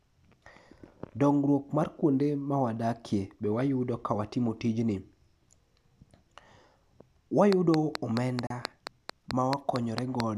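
From 7.53 to 10.21 s a train of clicks runs through the speech: about fifteen sharp ticks at a steady 4.5 per second, each with much the same shape and standing well above the level of the voice, audible in pauses as well. The evenly spaced, identical pulses set it apart from random crackle or dropout pops. Something is injecting a repeating impulse, likely interference from nearby equipment or a faulty connection or power supply.

At 8.47 s, inside that stretch, a gap at a join of encoded pieces cuts a 35 ms hole in the continuous speech, which then resumes exactly where it stopped. The edges are abrupt but softened by the codec. Unlike a dropout that loses material, nothing is missing. Separately encoded segments were joined without trimming, leaving each encoder's start-up delay and end padding in place.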